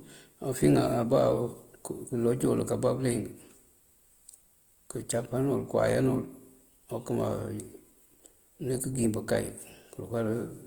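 Speech clip, grainy and rough all the way through even though the top end reaches about 20 kHz. That's likely Opus compression in its music mode, and it sounds like a low bitrate around 24 kbps.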